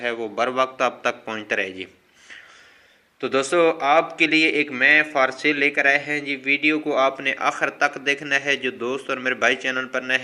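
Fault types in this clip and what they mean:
No technical faults can be heard anywhere in the clip. There is nothing here to list by type.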